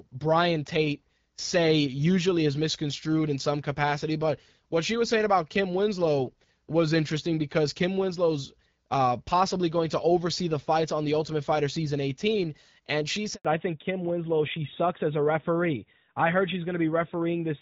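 At 13.35 s, just after "and she", a handover gap cuts the speech for 100 ms. The call switched networks and no speech frames arrived during the move. The sound fades out fast and goes silent. Whatever was said there is lost.

From 13.45 s to the end, the call falls back to narrowband. Until then the light HD Voice coding sounds like AMR-WB at about 12.65 kbit/s. Afterwards nothing above 4 kHz remains, which fits AMR-NB at 12.2 kbit/s. The speech turns duller and rougher.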